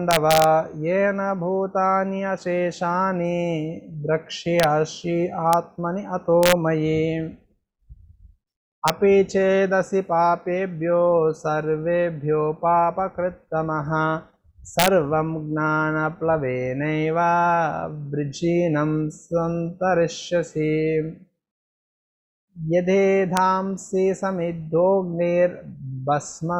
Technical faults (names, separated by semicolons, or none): integer overflow